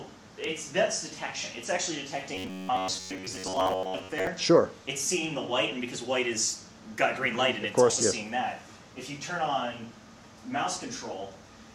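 From 2.35 s to 4.31 s the audio turns into robotic sound from repeated short buffers. It takes on a rigid, metallic buzz near 94 Hz. The buzz only loosely follows the shape of the sound underneath. For most of that stretch, the same tiny slice seems to loop. The likely cause is late-arriving audio. The player would fill each gap by replaying its last 10.7 ms or so. That repeat rate sets the fixed buzz pitch.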